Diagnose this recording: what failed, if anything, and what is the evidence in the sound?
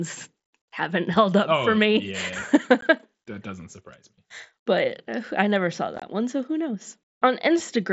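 Unconcealed Bluetooth headset packet loss at 2.81 s and 5.96–6.02 s, on the wireless link between headset and phone. The first is a 15 ms hole. The second, between "uh I never saw" and "one so who", loses about 37.5 ms spread over 60 ms (longest gap 22.5 ms). Missing mSBC speech packets were replaced with silence or an idle pattern rather than concealed, so both spots have abrupt-edged dropouts.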